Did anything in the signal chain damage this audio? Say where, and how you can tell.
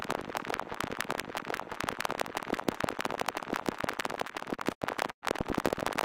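Yes. Timecode bleed enters at the analogue wiring stage and runs for the whole clip: a steady chirping warble switching between tones near 1 and 2 kHz, roughly 30 dB below the programme. Linear timecode at 29.97 frames per second is leaking from an adjacent cable or track.

From 4.27 to 5.24 s there is repeated packet loss (robotic sound) at the network stage. The audio turns choppy, with four holes, the longest 110 ms. The receiver stretches the previous audio across each gap, so about 23% of that span is concealment.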